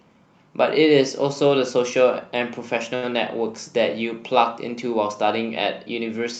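Around 2.95 to 3.14 s there's a short stall from a late packet: the jitter buffer ran dry, so the receiver held the last sound for about 72 ms before carrying on. Nothing's lost, but that stretch drags with a slight buzz or dip, and the rest of the speech lands 72 ms late.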